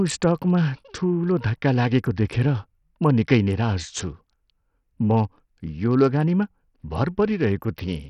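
From the first second to the end, the speech sounds gritty and coarse, with nothing above 14.3 kHz and the upper treble flickering in and out. That points to Bluetooth SBC compression as the likely cause. SBC splits the signal into a handful of wide bands and hands out bits crudely, so a starved bit pool, which fits something around 64 kbps, leaves the top bands empty and quantises the rest roughly, giving heavy grain and aliasing.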